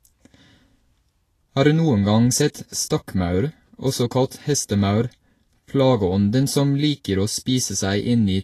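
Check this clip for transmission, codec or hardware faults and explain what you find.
One codec fault runs through the whole speech recording, most likely Vorbis compression. Throughout, the treble is grainy and hissy, consonants and attacks are smeared, and nothing remains above 14.2 kHz. At low quality the encoder keeps a smooth spectral outline but quantises the high-frequency detail so coarsely that it turns into noise of similar energy. The damage is plainly audible and suggests a rate around 34 kbps. A plain low-pass filter would leave the remaining treble clean rather than grainy.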